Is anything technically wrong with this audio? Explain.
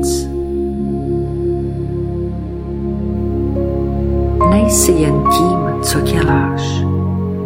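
No, nothing in this audio points to a technical fault.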